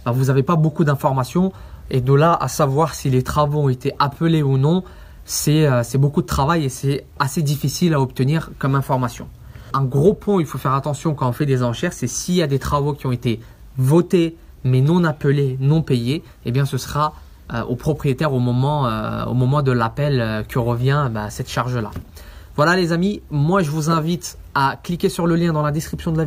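No technical faults can be heard anywhere in this recording.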